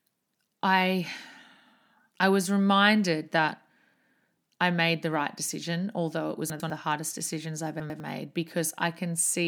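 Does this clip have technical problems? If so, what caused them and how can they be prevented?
Yes. Chunks out of order occur at 6.5–6.7 s and 7.8–8.0 s, where a 100 ms chunk plays one chunk late and swaps with its neighbour. The result is a jumbled moment, with three hard joins showing as vertical seams on a spectrogram. Reordering chunks by sequence number before playback prevents it.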